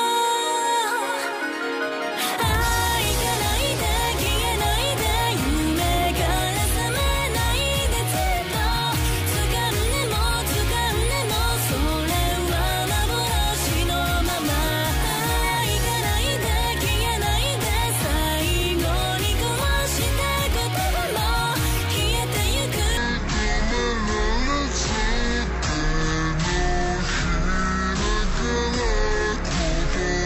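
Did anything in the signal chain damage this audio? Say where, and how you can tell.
Yes. From 22.97 s to the end at 30.25 s there is a section at the wrong speed. It plays at 0.508 times its original rate, likely from a clock mismatch at playback or editing. Timing stretches to nearly double, and pitch drops roughly ten semitones.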